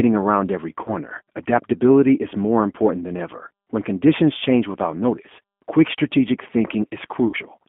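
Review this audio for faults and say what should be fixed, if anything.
The G.729 codec runs throughout, which fits 8 kbit/s. Vocal-tract and pulse modelling roughens the speech, and the spectrogram shows nothing outside roughly 200 Hz to 3.4 kHz. Prevent it with a wideband codec.

VoIP packet loss concealed by the speech codec occurs between "around every" and "adaptability is more important" (0.84–0.96 s, fitting about 20 ms lost) and again at 7.27–7.36 s (fitting 60 ms). The decoder extrapolates pitch and filter into a fading buzzy tone or coloured noise, shown as a stretched, shrinking waveform. Prevent it with jitter buffering and redundancy or FEC.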